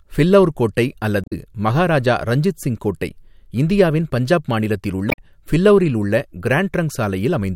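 At 1.24 to 1.33 s and again at 5.08 to 5.18 s the speech hits damaged data in the compressed stream: the decoder chokes on corrupted frames, loses sync and hunts for the next header, giving short squawky blips, with about 2 ms of extra time at the first.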